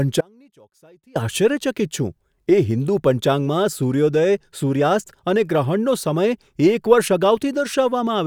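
From 0.21 to 1.15 s the speech suffers an audio dropout to a faint residue: for about 0.95 s the signal vanishes abruptly, leaving only a faint leak around 30 dB down, likely a brief break in the feed. A natural pause or fade would not cut this sharply.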